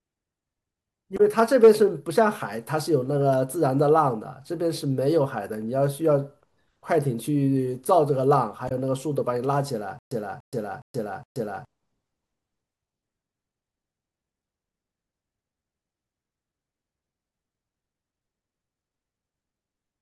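At 1.17 to 1.20 s there is damaged data in a compressed stream. Bytes in the coded speech were corrupted, so the decoder misread those frames, lost sync and hunted for the next valid frame header. The result is a brief glitch. On a spectrogram it shows as a narrow vertical smear of broadband energy, and the waveform shows a short break in the speech envelope.

From 1.39 to 1.68 s comes hard clipping. The peaks push about 3 dB past what a stage in the chain could pass, so their tops are sliced flat. This adds crackle to the loudest peaks. The waveform shows flattened plateaus, and the spectrogram shows extra harmonic energy reaching far into the upper kHz range above the speech.

At 8.68 to 8.72 s the same damaged-data fault returns: another burst of misdecoded frames, then a resync. It looks like the earlier one, a thin vertical streak of scattered energy with a small discontinuity in the waveform.

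From 9.99 to 11.65 s there is a stutter with silent gaps. The same 291 ms fragment plays four times, each repeat followed by about 125 ms of digital silence, giving an even 415 ms cycle. This is likely caused by the player or stream stalling and replaying its last buffer on each retry, and the speech that belonged in that stretch is lost. The waveform shows identical blocks separated by flat near-silent gaps, and the spectrogram shows repeated copies of one pattern with empty columns between them.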